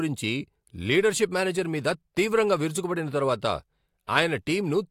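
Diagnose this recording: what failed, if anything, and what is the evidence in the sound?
Nothing failed; no faults audible.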